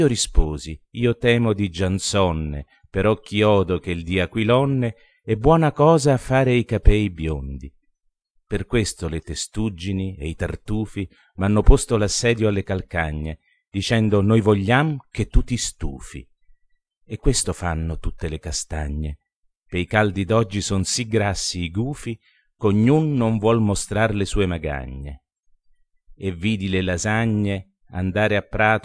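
Nothing in the audio stands out as a technical problem, so there's nothing to flag here.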